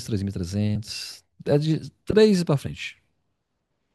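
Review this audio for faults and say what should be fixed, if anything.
Compressed frames skipped at 0.75 s: about two frames never reached the output, so the speech jumps ahead roughly 50 ms, consistent with frames of about 26 ms. Fix it by checking file integrity after encoding and transfer, and by re-encoding or re-sending any damaged or missing frames.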